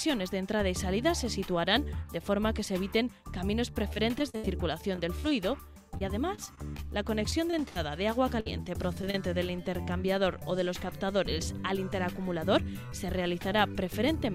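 From 3.93 to 5.32 s, 5.98 to 7.76 s and 8.40 to 9.15 s, repeated packet loss makes the sound choppy and robotic. Gaps of up to 68 ms are patched by repeating the preceding audio, which shows on a spectrogram as stuttering, smeared blocks.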